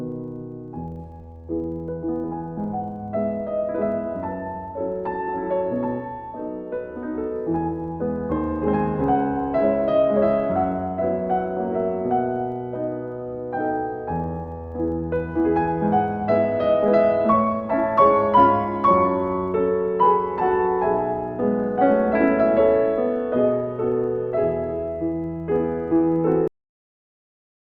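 A steady, rough buzz at 25 Hz runs from start to finish, a train of small ticks that grows louder with the sound and fades as it quietens. This is a filter restarted on every block: the filter discards its internal state at each block boundary and begins again from silence, so every block opens with a brief transient. A repeat rate of 25 per second fits blocks of 40 ms.

At 26.48 s the audio stops dead in the middle of a sound and falls straight to digital silence, with no decay or tail, and that silence lasts until the clip finishes. This is a cut-off end: the final buffers were never written out or played, so the material that should have carried the sound to its natural close is missing and the ending is abruptly severed.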